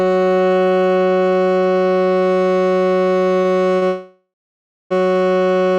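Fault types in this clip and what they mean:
Short stall from a late packet: Twice in quick succession, at 3.41 s and 3.77 s, the music briefly hangs on the sound just played, stretching it by 32 ms and then 49 ms with a faint buzzy smear before carrying on. Nothing is skipped. Each time a packet arrived late, the jitter buffer emptied, and the receiver padded the gap by extending the last audio, so the music resumes from the same point, pushed slightly later each time.
Call audio freeze: From 3.87 s to 4.92 s the music stops moving forward for about a second. The last sound drags on as a fading buzz that sinks into silence, and roughly 590 ms of that hold is simply quiet, before the music picks up exactly where it stopped, with nothing lost. The likely cause is packets held up in transit long enough to drain the jitter buffer, so the receiver filled the wait with decaying audio.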